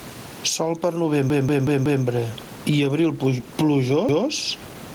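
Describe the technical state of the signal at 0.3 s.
At 0.3 s, as across the whole clip, the speech sounds squashed, with the gain swinging by around 15 dB. This is gain pumping, likely from gain set too high with a fast limiter clamping every peak. The room noise sits about 32 dB below the speech.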